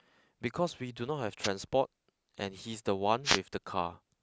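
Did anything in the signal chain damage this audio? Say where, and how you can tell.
Yes. Wireless microphone noise hits at 1.43–1.48 s and 3.24–3.39 s: multipath fades in the analogue radio link let receiver static through, seen as broadband vertical smears.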